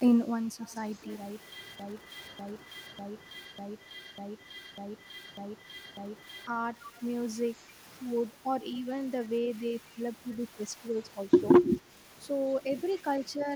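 From 0.62 to 1.12 s there's an echo leak: a faint copy of the speech trails about 0.25 s behind, well below the direct sound. It's likely the far end's loudspeaker bleeding into its mic, with the echo canceller not removing all of it.

Then from 1.8 to 6.47 s comes a broken-record loop. A 0.6 s scrap repeats back to back, eight times, and whatever should have played there is gone. That's likely a stalled player or stream resending its last buffered chunk.

At 6.82 to 6.99 s the echo leak returns, again about 0.25 s late, a touch louder this time but still quiet.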